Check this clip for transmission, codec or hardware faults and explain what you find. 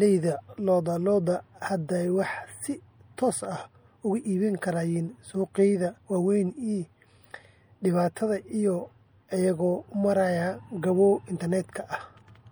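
One codec fault runs through the whole speech clip. MP3 compression is the likely cause, with plainly audible damage: the encoder drops the treble and toggles weak frequency lines between frames, leaving a watery, swirly texture and metallic chirps on s sounds. The damage fits a 64 kbps encode. A spectrogram would show a flat ceiling on the high frequencies and flickering holes.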